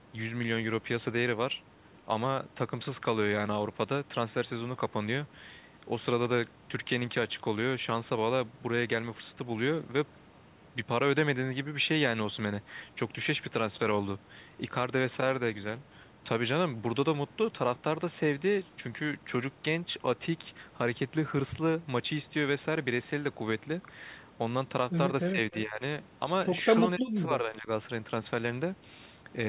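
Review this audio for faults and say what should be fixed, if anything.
Speech dips twice: from 25.32 to 25.82 s by about 15 dB, and from 26.96 to 27.69 s by about 25 dB. This is likely speech suppressed in double talk. The echo canceller treated the overlapping talker as loudspeaker echo. Better double-talk detection would prevent it.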